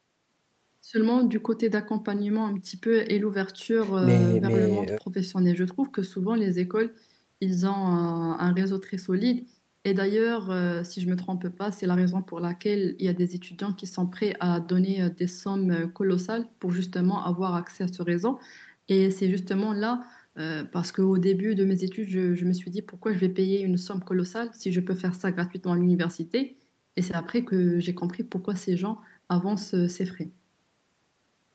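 Listening to this speech recording, which passed through normal call microphone processing and a WebRTC call path, nothing stood out as a technical problem.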